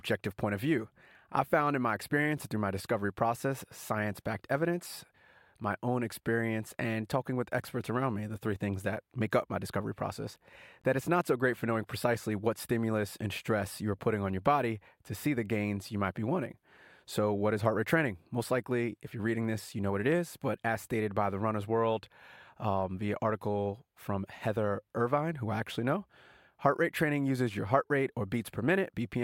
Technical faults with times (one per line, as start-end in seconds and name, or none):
10.81-10.85 Bluetooth dropout